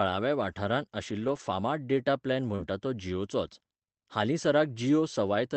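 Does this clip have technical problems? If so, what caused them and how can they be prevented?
Yes. From 1.19 to 1.41 s, and again from 2.58 to 2.64 s, lost packets were rebuilt from error correction: low-bitrate copies fill the gaps, so the sound turns rough and noisy but never drops out. At 2.55 s a short concealed packet loss continues the previous sound for about 30 ms, giving a brief smear rather than the coarse texture of the rebuilt stretches. A steadier network path and a deeper jitter buffer would prevent both kinds of loss.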